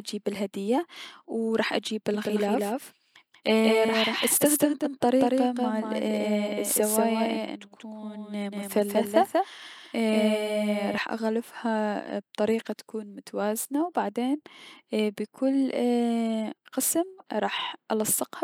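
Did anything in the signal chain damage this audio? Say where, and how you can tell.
Yes. From 2.14 to 10.98 s a dry, slightly quieter copy trails about 200 ms behind and starts and stops abruptly. This is a doubled audio track, likely from a second, slower capture path.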